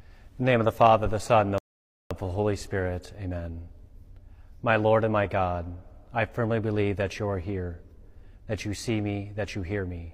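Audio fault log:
1.58–2.11 s, rebuffering stall: playback exhausted its downloaded audio and halted until more data arrived, so the speech drops to silence for about 0.52 s and then picks up exactly where it stopped, with nothing missing but the clip running that much longer.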